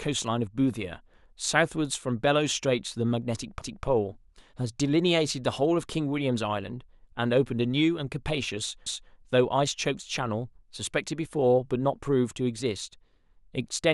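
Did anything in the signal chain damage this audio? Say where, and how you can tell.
Yes. Overlapping chunks at the buffer stage: at 3.61–3.87 s and 8.86–9.12 s, 250 ms replays as a stutter, because each 5 s chunk starts before the previous one ends.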